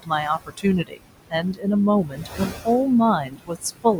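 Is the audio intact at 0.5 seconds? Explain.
No. Between 0.37 and 0.65 s the speech is cut by the noise suppressor: it mistakes part of the speech for background and turns it down by up to about 16 dB, across roughly 150 ms, so sounds there come out swallowed and faint. The waveform's envelope sags in that span, and the spectrogram shows speech energy thinned or missing. Noise suppressor artifacts also run through the whole clip, this moment included. The steady noise is pulled down by about 20 dB, sinking between the words and rising under them.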